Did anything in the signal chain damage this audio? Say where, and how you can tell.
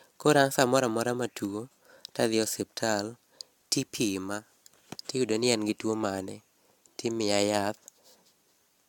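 Yes, at the codec stage, throughout the speech. The sound is swirly, hollow and smeared, with softened attacks. A spectrogram shows nothing above 17.1 kHz and accumulating spectral holes, which fits AAC at around 96 kbit/s. The likely cause is generation loss from re-encoding a few times, with each pass requantising on a shifted frame grid.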